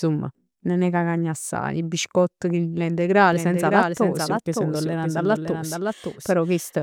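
A doubled audio track cuts in abruptly at 3.33 s in this speech, after "assaje 'e biscott chillillà", and lasts to the end: a dry, somewhat quieter copy trails about half a second behind, likely captured a second time through a slower path.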